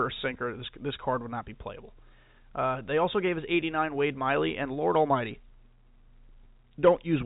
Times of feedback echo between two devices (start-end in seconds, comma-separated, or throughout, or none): none